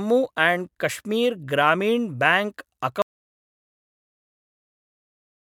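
The input was likely lost at 3.02 s, after "आण्ड् कश्मीर् ग्रामीण् ब्याङ्क्", causing an audio dropout to silence: speech stops dead into silence, no room tone, until the end.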